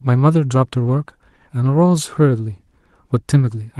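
At 0.87 to 0.93 s, a lost packet was rebuilt from error correction. About 40 ms of audio, which fits two 20 ms packets, was rebuilt from the low-bitrate copies carried in the following packets of the Opus call stream (12 kHz bandwidth). The gap is filled, but that stretch sounds briefly rougher and noisier.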